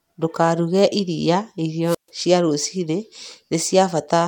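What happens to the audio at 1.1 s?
Nothing goes wrong at 1.1 s; the speech plays through that moment intact, with no dropout, click or distortion to be heard.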